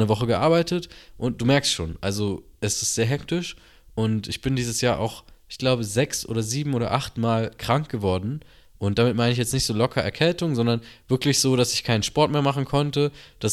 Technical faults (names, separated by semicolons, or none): none